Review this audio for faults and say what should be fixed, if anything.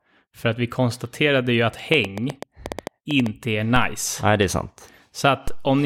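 A train of clicks runs from 1.94 to 3.27 s: roughly ten sharp, similar-shaped pulses at an uneven spacing averaging about 8.3 per second, peaking around 10 dB above the speech and audible between syllables. The likely source is interference from nearby equipment or a faulty connection or power supply. Unlike isolated clicks from bad edits or dropouts, these repeat with a near-constant shape over more than a second. To prevent it, move or shield the interfering gear and check cabling and interface drivers.

Two DC steps occur, at 3.76 and 5.48 s. At each, the waveform's zero line jumps by an offset of about -15 dBFS and then drains away slowly, as a roughly 2 Hz high-pass in the chain pulls it back toward zero. Each one is heard as a single low thump while the speech continues unchanged. That sets these apart from the click train, whose pulses are brief, bright, and repeated. To prevent it, keep the converter from recalibrating mid-take and avoid switching in inputs that carry an offset while recording.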